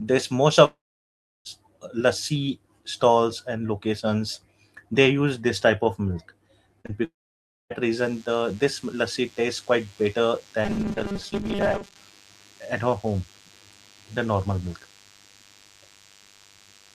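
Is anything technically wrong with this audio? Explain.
Yes. The clip has four kinds of fault.

Long network dropouts occur at 0.65 to 1.47 s, just before "lassi stalls and locations", and at 7.04 to 7.72 s. About 0.8 s and 0.66 s of audio are lost. Each gap begins with a fading buzzy continuation of the last sound. Then there is silence for about 0.69 s and 0.59 s. The audio resumes without the missing part. A network outage is the likely cause.

Short concealed packet loss occurs right after "this type of milk", at 6.81 to 6.86 s and 6.86 to 6.90 s. About 40 ms and 20 ms never arrived. The receiver patched each hole by extending the preceding sound and blending back. This leaves a brief smear.

DECT cordless phone buzz runs from 7.94 s to the end. A nearby DECT unit transmits a burst every 10 ms, and the audio circuitry rectifies it. The result is a thin, steady 100 Hz buzz with many harmonics, about 30 dB below the speech.

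Robotic sound from repeated short buffers occurs from 10.65 to 11.97 s. The speech becomes a rigid metallic buzz at 200 Hz. That pitch fits a 5 ms buffer being replayed while roughly half of the real audio is skipped. Late-arriving audio is the likely cause.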